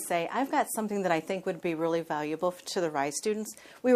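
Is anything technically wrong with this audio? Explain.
No, nothing technically wrong can be heard in this audio. No working path is listed here, so there is nothing further to point out.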